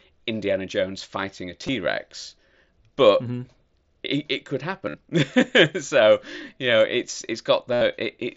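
Concealed Bluetooth headset packet loss hits three times. At 1.67 s, after "fighting a", it's nearly hidden. After "it it could" (4.86 to 4.94 s) and "so you know it's" (7.73 to 7.81 s), lost packets are patched by repeating recent waveform, giving a held buzz, then a warble.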